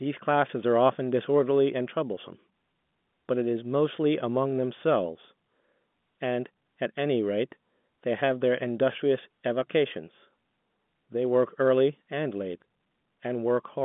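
Listening through the speech, nothing stood out as a fault; the audio sits within the narrow telephone band of G.711 coding, with nothing heard above about 3.8 kHz.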